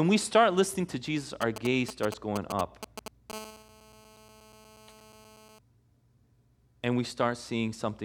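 A 2G mobile phone close to the recording chain interferes with this speech clip in two stages. From 1.42 to 3.32 s the handset is only signalling, sending short groups of radio bursts, and the audio circuitry rectifies them into GSM signalling bursts. They come through as a galloping dit-dit-dit of short 217 Hz buzzes, fairly loud at roughly 10 dB under the speech. From 3.33 to 5.59 s the phone is in a call and transmits continuously in its 217-per-second burst pattern, and the same rectification turns this into steady GSM phone buzz. It is a raspy, harmonic-rich drone at 217 Hz, about 22 dB below the speech, that runs underneath the speech and has no relation to what is being said.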